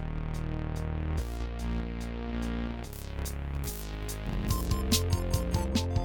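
From about 2.93 s to 5.68 s the music suddenly goes thin and glassy, and that's pre-emphasis left on. Somewhere the treble got boosted for transmission and the matching de-emphasis cut never happened, so the top end stays lifted by about 13 dB at 10 kHz relative to 1 kHz. The shape of the lift fits the standard 75 µs FM curve. The sound turns bright and sibilant, and the low end sounds like it's shrunk away underneath.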